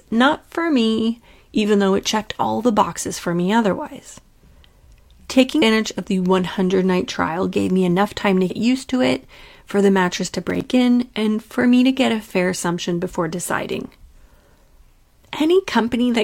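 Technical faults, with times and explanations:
5.58–5.62 s and 8.46–8.52 s: damaged data in a compressed stream. Each is a short glitch, the first just before "of the", the second between "me enough time to" and "used to it for". Corrupt frames throw the decoder out of sync until it finds the next frame header.
10.45–10.65 s: processor overload crackle. A gritty burst sits between "for the mattress to" and "in and for me". Several audio buffers in a row missed their deadlines, each leaving a hard-edged gap of silence. The pattern fits buffers of around 10 ms, with about five missed in succession.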